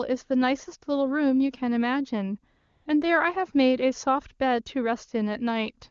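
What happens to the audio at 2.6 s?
AMR comfort noise fills 2.57 to 2.85 s: with no speech frames sent for about 280 ms, the receiver synthesises a steady, smooth hiss, unlike a dropout's dead silence.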